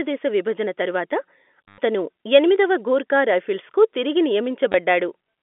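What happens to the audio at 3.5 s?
Nothing goes wrong at 3.5 s: the speech carries on intact through that moment, with the narrow telephone band of the G.711 line simply continuing as it does throughout.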